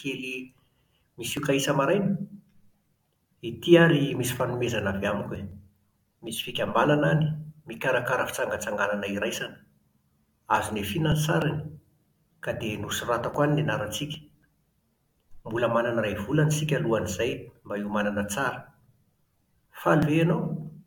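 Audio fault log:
1.37 s, 5.36 s, 9.34 s, 13.34 s and 17.33 s: overlap between stream segments. Each event is a tiny click or skip in the speech. They fall every 4 s, matching 4 s segments. At each join the time stamps of adjacent segments overlap, and the player trims the overlap. The trimmed audio was not duplicated, so 9 to 18 ms of real sound is lost. The waveform jumps across the gap, and that step is what produces the click.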